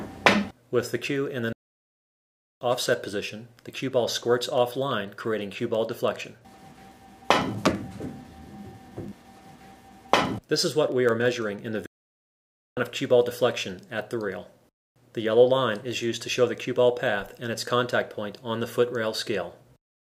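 At 1.53 s the sound halts mid-flow and the output falls to silence until 2.61 s, a gap of about 1.08 s. The same happens again from 11.86 s to 12.77 s, roughly 0.91 s. These are playback stalls, likely from the player starving for data or its thread blocking. Unlike a brief dropout of a few milliseconds, each pause lasts near a full second, and the audio resumes afterward.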